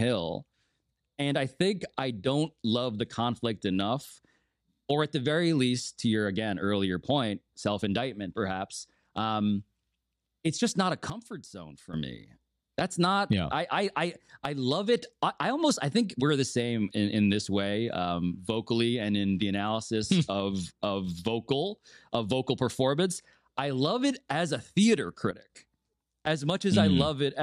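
A digital gain setting likely switched without a ramp, causing a sudden gain jump: after "it's just not a", speech and background drop together by about 12 dB from 11.10 to 11.94 s, then after "it as a theater", by about 11 dB from 25.31 to 25.50 s.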